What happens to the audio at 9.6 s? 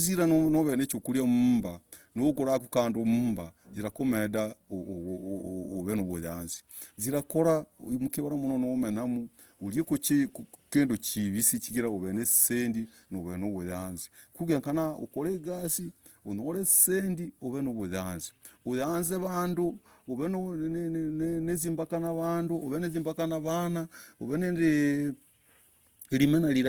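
Opus compression is at work at 9.6 s, as it is for the whole clip. The speech sounds grainy and rough, with tonal parts turned noisy, and the damage is plainly audible. This is likely the Opus encoder in its music (CELT) mode running short of bits, which fits a rate around 24 kbps. It keeps each band's energy but fills starved bands with folded or noise-like content. Bandwidth stays full, reaching about 20.2 kHz.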